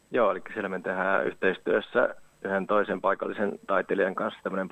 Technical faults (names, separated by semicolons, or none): none